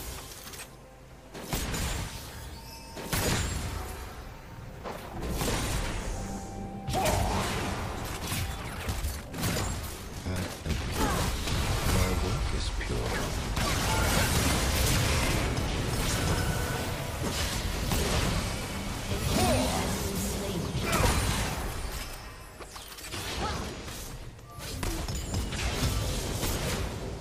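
From 8.73 to 10.99 s, a time-stretched section runs at 1.9 times speed with unchanged pitch. It sounds rushed, likely from software squeezing it to fit.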